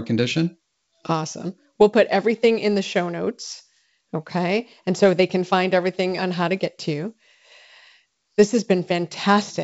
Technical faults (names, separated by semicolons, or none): none